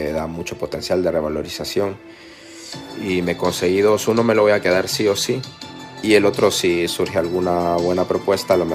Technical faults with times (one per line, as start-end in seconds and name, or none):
none